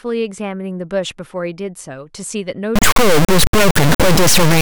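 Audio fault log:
2.76 s to end, integer read as float: from here the speech turns into an extremely loud, buzzing square wave, because 32-bit integer samples are being interpreted as 32-bit floats, producing near-zero or far-beyond-full-scale values that slam between silence and the clipping limit.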